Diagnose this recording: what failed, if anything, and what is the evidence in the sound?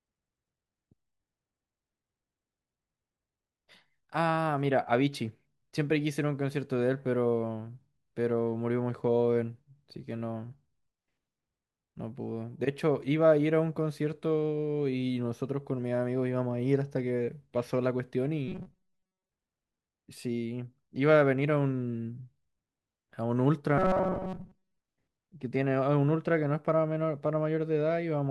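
Robotic sound from repeated short buffers at 18.48 to 19.31 s and 23.78 to 24.78 s: the speech turns into a stiff metallic buzz at 188 Hz. The likely cause is starved driver buffers looping chunks of about 5 ms, which replaced most of the real audio.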